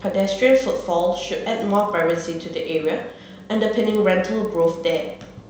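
From start to finish there's a resampler restarted on every block: each 50 ms chunk was converted from 16 to 48 kHz on its own, so the edges go wrong. You get a steady 20 Hz ticking riding on the speech, gone in the pauses.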